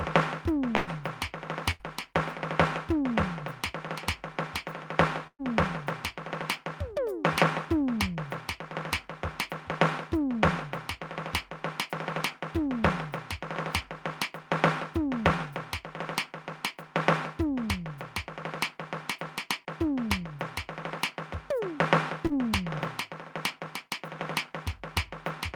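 Right at the start of the music there's a burst of packet loss from 0.75 to 0.90 s. About 120 ms of audio never arrived in time, so the receiver stretched the last bit of sound for about 116 ms, fading it down as it went, then jumped ahead with that stretch of music simply gone. A second burst follows at 1.71 to 1.82 s, a bit shorter, with about 80 ms lost and 82 ms of held, decaying fill before playback resumes further along. The third burst, at 5.27 to 5.42 s, is different. Again about 120 ms is missing and 116 ms is papered over, but here the concealment fades all the way out and you get about 60 ms of actual silence before the music picks back up.

Much later, at 22.27 to 22.33 s, there's a short concealed packet loss. Only about 40 ms went missing, and the decoder covered it with about 30 ms of continued sound before blending back into the real signal. It comes across as a quick smear or wobble rather than a proper dropout.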